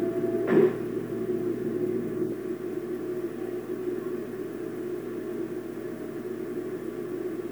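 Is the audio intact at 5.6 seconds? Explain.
Yes, the audio is intact at 5.6 seconds, with no audible fault at that moment.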